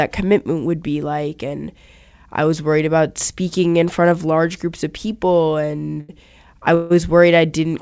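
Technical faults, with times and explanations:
5.93 to 5.99 s and 6.01 to 6.11 s, short stall from a late packet. Right after "large groups of people" the sound hangs twice in quick succession. The first hold lasts about 40 ms, the second about 80 ms. Each time a packet came in late and the jitter buffer emptied. The receiver stretched the last bit of sound to cover the wait, which gives a brief held, slightly buzzy moment. Then the audio resumed exactly where it paused. Nothing is lost, but the speech falls a little behind.
6.75 to 6.95 s, call audio freeze. The sound stops moving for roughly 150 ms and is carried on as a fading buzz rather than going silent. This is likely a run of packets held up in transit, leaving the buffer empty for longer than a single late packet would. When they arrive, playback picks up from the same point. So a small gap has been inserted into the speech, with nothing missing. 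The call codec's band limit holds throughout, with nothing above 8 kHz.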